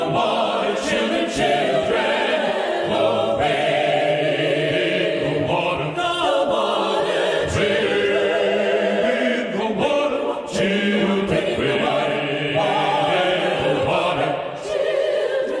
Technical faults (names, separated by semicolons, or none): wrong sample rate